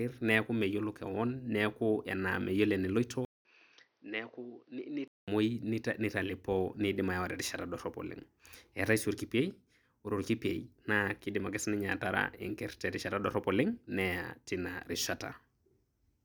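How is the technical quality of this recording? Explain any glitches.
The recording has one clear glitch. From 3.25 to 5.28 s, the input likely switched to a poorer device with a narrower band. After a 200 ms silence, the speech loses everything above 6.2 kHz, drops about 10 dB and picks up new noise about 40 dB down, sounding boxy.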